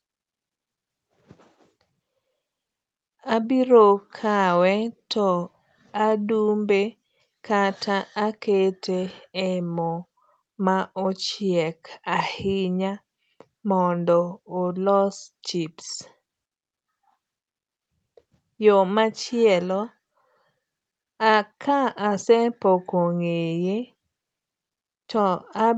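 Nothing goes wrong technically in this speech recording; it simply carries the familiar sound of a call, with the top of the band stopping at around 8 kHz as the call path would leave it.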